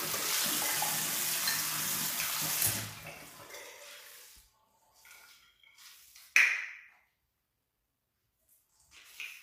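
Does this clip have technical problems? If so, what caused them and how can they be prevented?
Yes. The audio was likely passed through low-delay AAC compression, AAC-ELD, whose short frames resolve fine detail poorly; the damage is plainly audible throughout, which fits a low bitrate around 32 kbps, with nothing above 15.6 kHz. Encoding at a higher bitrate, or with a longer-frame codec where delay doesn't matter, prevents this.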